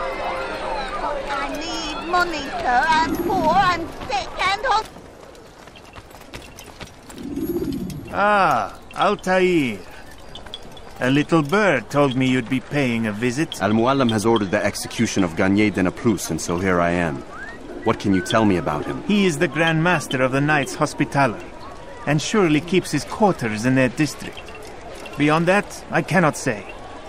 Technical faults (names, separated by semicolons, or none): none